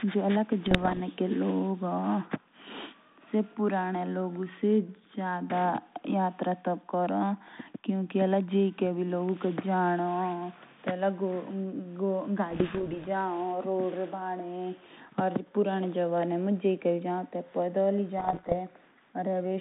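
Pops and short rough, crackly bursts with brief jumps in level break into the speech at 0.66 to 1.01 s, 12.50 to 13.05 s and 18.18 to 18.55 s. These are bit errors on an ADPCM link. A small share of bits, around one percent or less, were flipped. Each wrong bit knocks the decoder's step size and prediction off course, so the damage rings on briefly. The narrow 150 Hz to 3.7 kHz band fits 32 kbit/s G.726 ADPCM.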